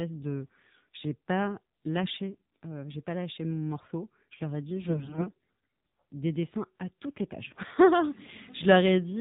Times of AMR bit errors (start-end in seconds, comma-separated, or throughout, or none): 4.88-5.37